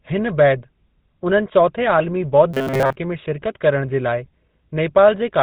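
Throughout, a buzzy, gravelly GSM full-rate codec sound fits about 13 kbps; the spectrogram stops flat near 4 kHz, with coarse, pulse-driven excitation. From 2.54 to 2.96 s, just before "में शिरकत", a rigid 133 Hz metallic buzz, likely from repeated 7.5 ms buffers, shows as evenly spaced waveform copies and straight harmonic lines.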